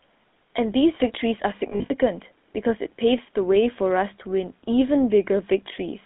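From start to finish the speech has a buzzy, gravelly roughness, with a dull band that stops near 3.6 kHz and carries little below 200 Hz. This is the GSM full-rate codec at work, and the damage is plainly audible. The codec rebuilds the voice from a vocal-tract model fed by sparse, regularly spaced pulses, which fits its 13 kbps rate. That coarse excitation gives the grit, and the band edge takes away the brightness.

Between 1.7 and 1.91 s the sound turns into a rough, metallic ringing that stutters across a span of about 200 ms. These are lost GSM frames. About 140 ms of that stretch is missing, in broken pieces, and the longest single gap is roughly 70 ms, which fits several lost 20 ms frames. Each gap was filled by repeating the last good frame. Because the gaps are short, the held sound rings and then gives way to the speech that returns, never fading to full silence.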